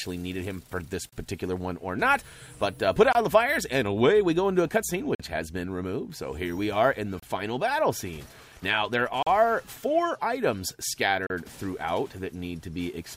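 Hard-edged silent holes of about 25 to 46 ms cut into the sound at 1.09, 3.13, 5.15, 7.20, 9.23 and 11.27 s, recurring every 2 s. These are gaps between stream segments. The time stamps of adjacent 2-second segments don't quite meet, and the player fills each space with silence. No audio is lost.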